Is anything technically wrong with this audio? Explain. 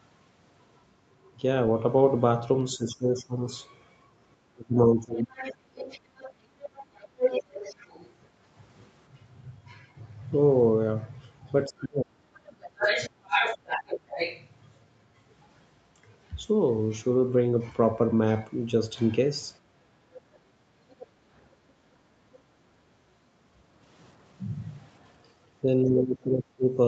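Yes. Speech suppressed in double talk appears at 2.77–5.31, 11.68–13.3 and 25.63–26.71 s. The speech dips by about 25, 35 and 25 dB, likely because the echo canceller turned everything down while both sides talked. Unlike gating, the talker's own speech is what drops.

The other side's voice leaks through at 3.16–3.20, 5.2–8.13, 11.79–14.47 and 20.15–22.39 s. A second voice sits about 15, 15, 5 and 25 dB under the speech, likely loudspeaker echo the canceller left behind. It is an added voice, not a loss.

The background is gated by the echo canceller at 19.61–19.74 s. The room sound dips about 7 dB for roughly 150 ms, only the ambience, and returns when the canceller releases. All of this sits within the call path's bandwidth, which ends at 8 kHz.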